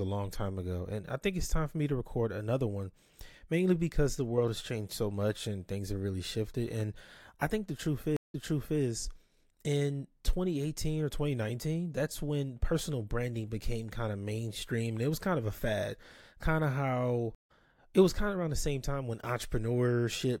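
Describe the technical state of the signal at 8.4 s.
A stream reconnect spans 8.17 to 8.81 s: the connection dropped, the player stalled, then re-established the link and started a new decoder partway through the stream. Just after "I think the truth" the signal cuts to silence for 170 ms, and when it returns, the server has resent buffered data, so playback resumes 470 ms earlier than where it broke off. The listener hears a brief gap followed by a short stretch of repeated audio.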